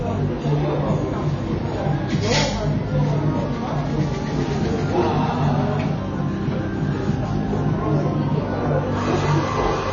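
Sounds here, and the whole clip is dull with nothing above about 6.9 kHz and a smeared, warbly texture, likely AAC compression at a low bitrate, around 24 kbps.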